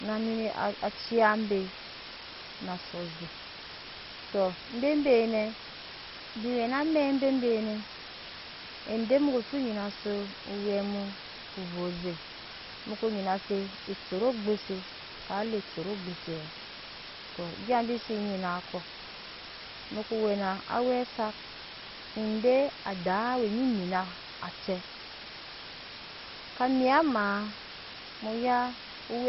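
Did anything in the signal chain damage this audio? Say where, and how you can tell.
Yes. At the sample-format conversion stage, the speech has been reduced to about 5 bits with dither. A steady, even hiss sits only about 10 dB below the speech for the whole clip. Because the rounding error was dithered into plain white noise, there is no grainy distortion following the voice, unlike undithered truncation.

At the codec stage, the sound is dull, with nothing above 5.6 kHz, and has a gurgling, granular texture throughout. This is likely MP2 compression starved of bits, which fits roughly 32 kbps. Upper sub-bands switch off and the remaining ones are coarsely quantised. A plain low-pass filter would cut the top smoothly, without this flicker.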